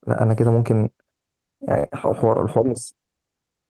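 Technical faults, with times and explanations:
0.51–0.61 s, lost packets rebuilt from error correction: about 60 ms sounds rougher and noisier, because the decoder played the low-bitrate backup copies that the following packets carried.
1.79–1.86 s, burst of packet loss: the last speech sound is stretched and fades for about 46 ms, then it jumps ahead. Roughly 40 ms of real audio just isn't there.
1.84–1.86 s, lost packet rebuilt from error correction: at the tail of that burst, a further 20 ms comes through grainy because it was rebuilt from the coarse backup copy.
1.88–1.92 s, short concealed packet loss: there's a quick smear of about 20 ms where the receiver extended the previous sound to cover the late packet, then blended back in.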